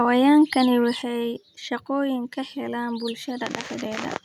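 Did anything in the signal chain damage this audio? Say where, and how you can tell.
Yes. At 1.02 s, speech and background drop together by about 6 dB in one step; the microphone volume stepped down, likely through call-processing input gain control, not a gradual fade.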